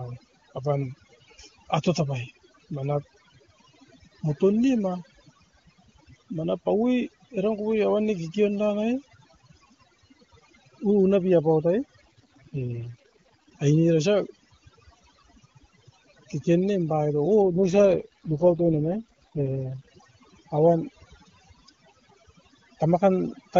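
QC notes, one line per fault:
Throughout: overdone noise removal. Aggressive suppression gates bands near the noise estimate, leaving near-silent background with twinkling specks and speech with quiet detail lost.
12.05–13.49 s and 17.42–19.87 s: AMR rate drop. Same bandwidth, no gap, but speech turns rough and synthetic, consistent with the codec falling from its top HD Voice rate to about 6.6 kbit/s.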